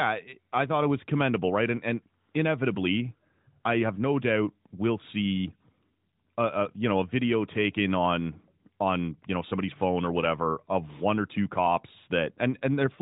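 No technical faults are present; the speech is band-limited below 4 kHz with only light coding texture, as expected from an AMR-NB narrowband mobile path at around 12.2 kbps working normally.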